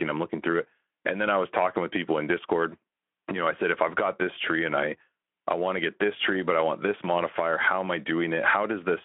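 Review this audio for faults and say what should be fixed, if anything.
Nothing here needs fixing; no faults can be heard.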